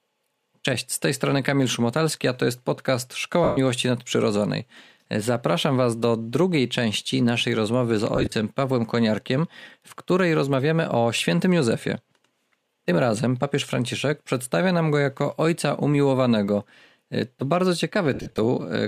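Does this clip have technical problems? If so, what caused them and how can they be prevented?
Yes. Bluetooth LE Audio frames were lost at 3.44 to 3.58 s (about 130 ms in one run), 8.16 to 8.32 s (80 ms scattered, runs near 20 ms) and 18.14 to 18.38 s (150 ms scattered, longest run about 50 ms). The LC3 decoder filled each gap by repeating the last spectrum with scrambled signs, so the speech turns into a brief noisy smear that fades toward silence in the longer runs. Keeping the earbuds or headset close to the source, with a clear line of sight and away from crowded 2.4 GHz traffic, would prevent these dropouts.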